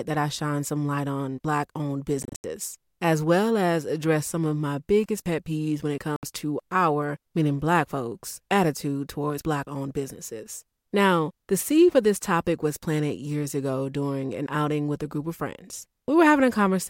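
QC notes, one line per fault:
2.23–2.44 s, Bluetooth dropout: the speech breaks up into several short silent holes totalling 160 ms within about 210 ms, the longest gap 80 ms, with hard edges. This is likely packets arriving too late at the headphones and being discarded, so playback resumes further on as if it had kept running.
6.16–6.23 s, Bluetooth dropout: a single 67 ms hole cuts the speech abruptly, likely the same late-packet loss, with the sound picking up mid-stream afterwards.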